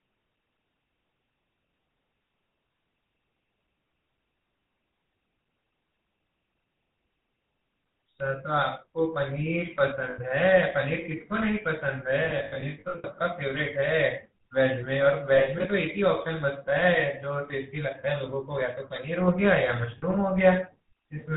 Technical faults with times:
0.00-21.37 GSM full-rate codec
10.10-10.19 lost GSM frames
12.24-13.05 lost GSM frames
15.36-15.66 lost GSM frames
19.98-20.03 lost GSM frames

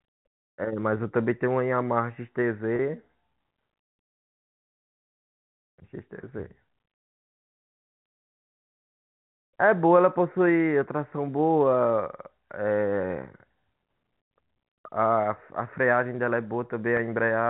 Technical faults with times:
2.76-2.79 packet loss with pitch repetition
6.22 packet loss with pitch repetition
16.97 packet loss with pitch repetition

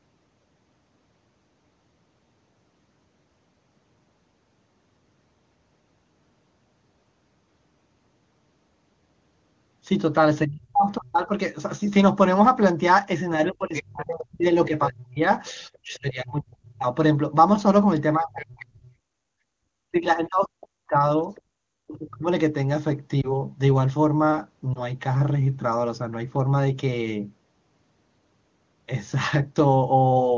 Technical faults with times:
10.45-11.30 speech suppressed in double talk
13.46-15.99 other side's voice leaking through
13.48-22.27 speech suppressed in double talk
18.40-18.63 other side's voice leaking through
19.17-19.29 background gated by the echo canceller
21.35-21.41 other side's voice leaking through
23.21-23.34 lost AMR speech frames
24.74-24.82 lost AMR speech frames

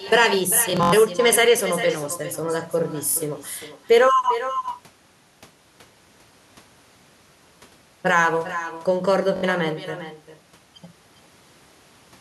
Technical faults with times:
0.00-12.20 echo with no canceller
0.70-0.93 Bluetooth stutter
3.09-3.17 Bluetooth stutter
9.36-9.44 Bluetooth stutter

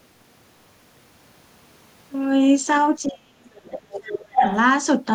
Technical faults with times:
3.06-3.71 speech suppressed in double talk
3.69-4.56 other side's voice leaking through
4.32-4.43 speech suppressed in double talk

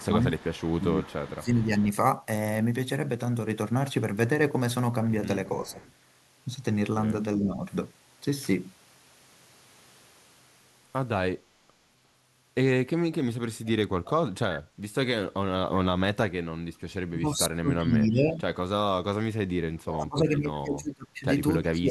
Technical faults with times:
0.00-1.72 speech suppressed in double talk
0.04-1.83 echo leak
5.62-5.81 speech suppressed in double talk
5.67-5.93 echo leak
7.45-7.64 speech suppressed in double talk
14.64-14.81 background gated by the echo canceller
17.09-21.90 speech suppressed in double talk
19.93-19.97 echo leak

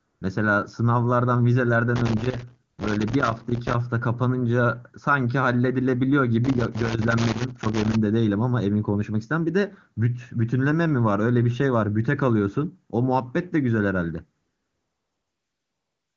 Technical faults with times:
0.00-0.21 AMR comfort noise
1.96-3.74 loose connector crackle
2.71-2.77 AMR comfort noise
6.45-7.95 loose connector crackle
14.41-16.16 AMR comfort noise

